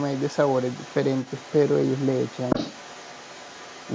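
Speech recorded through call microphone processing, with nothing above 8 kHz, carries the other side's voice leaking through from 0.0 to 3.95 s, sitting roughly 20 dB below the talker. The likely cause is an echo canceller that left part of the loudspeaker playback in the microphone signal. On a spectrogram it shows as faint, separate harmonic traces under the main speech.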